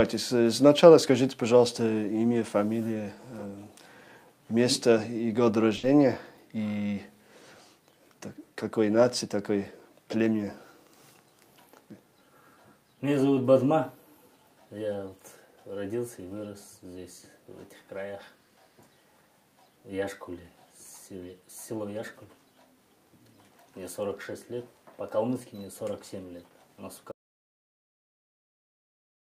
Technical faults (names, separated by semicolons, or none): burst of packet loss; audio dropout to silence